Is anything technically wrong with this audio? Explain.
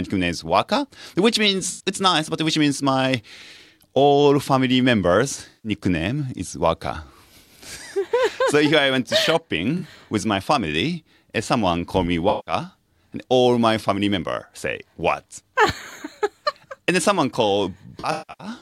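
Yes. The audio has AAC frame loss with concealment at 1.71 to 1.84 s, 5.49 to 5.71 s, 9.78 to 9.82 s, 12.29 to 12.54 s, and 17.99 to 18.47 s. Compressed frames went missing. The decoder patched each gap from the last good spectrum. Each patch sounds like a brief smeared, noisy blur. The final event is scattered, with its longest dropout around 150 ms.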